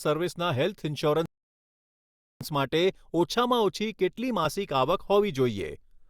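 At 1.26 s a rebuffering stall halts playback into silence until 2.41 s, adding 1.15 s; unlike a dropout, the speech then resumes exactly where it stopped.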